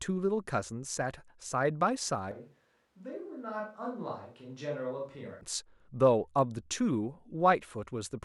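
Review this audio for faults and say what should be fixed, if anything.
From 2.31 s to 5.41 s the speech abruptly turns roomy and hollow, thin in the bass, roughly 10 dB quieter, with background noise only about 35 dB below the voice, then snaps back. This is a switch to a distant microphone, likely a failed close mic covered by the camera's. A plain gain dip would keep the tone, and added reverb wouldn't strip bass or raise the noise floor. Check the close mic's connection and levels before recording.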